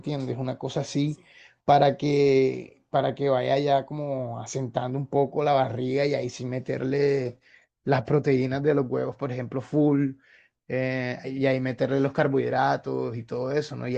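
No technical faults are audible.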